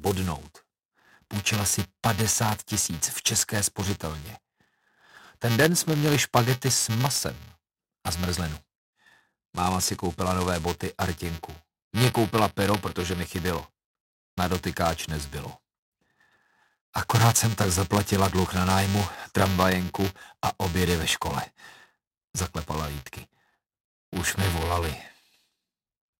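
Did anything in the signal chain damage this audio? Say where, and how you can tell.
Yes. A steady robotic buzz at 345 Hz rides under the sound throughout and drops away in silences. This is buffer tearing at the driver stage. Writer and reader have slipped, so a small slice of each period repeats audio from a few milliseconds earlier, which fits a 128-sample buffer.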